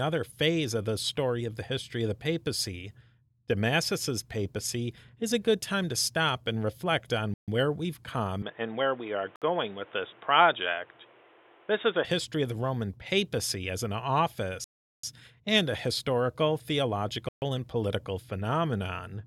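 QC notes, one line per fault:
7.34–17.42 s, Bluetooth stall: four cuts to dead silence. The first is at 7.34 s (about 0.14 s), after "stop and reflect on", resuming on "where we've". The others are at 9.36 s (0.06 s), 14.64 s (0.39 s), and 17.29 s (0.13 s, just before "and political"). Each time the speech halts abruptly and carries on where it broke off. The likely cause is interference holding up packets until the headphones' buffer ran dry and playback waited for the resends.
8.42–12.05 s, input switched to a poorer device: just after "reflect on where we've" the speech loses everything above 3.8 kHz and turns dull and boxy. A new background noise sits roughly 30 dB under the signal. The full bandwidth returns just before "history of the". Loudness stays about the same, with no gap at either change. The recording likely jumped to a narrower-band microphone or a headset's call profile and then back.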